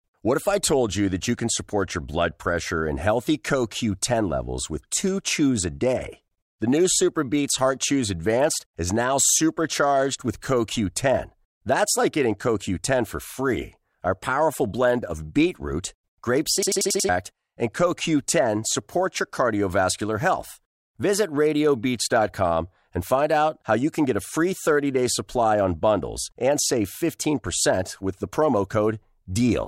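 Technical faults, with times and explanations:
16.63–17.09 s: system hang loop. The speech abruptly locks onto one fragment about 93 ms long, which repeats exactly five times at 10.8 Hz and produces a rapid machine-gun stutter rather than a buzz. The host or audio driver stalled while the output hardware kept replaying the same ring buffer, whose length fits a 4096-sample buffer. Fresh audio resumes only after the stall clears, and about half a second of the original speech is missing.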